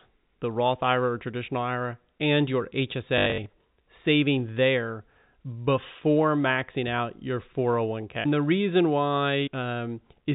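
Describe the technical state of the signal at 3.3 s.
At 3.3 s you're right in the middle of packet loss with last packet repeated, running 3.18 to 3.46 s between "and your" and "saving there". About 160 ms went missing across that 280 ms stretch, with the longest gap 80 ms. The receiver kept replaying the last good chunk, so you get a brief robotic stutter.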